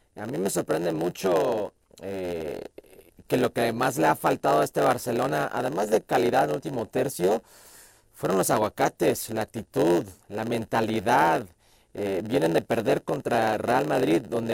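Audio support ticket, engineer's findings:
Block size mismatch (padded), whole clip: upstream stage writes short blocks, downstream zero-fills the remainder. Gap per block gives a 91.9 Hz buzz; speech runs at 0.919x speed.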